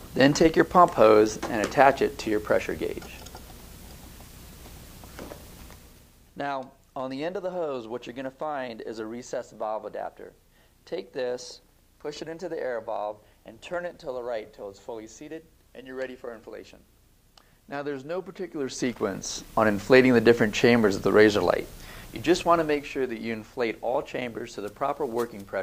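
No technical faults are heard in this clip.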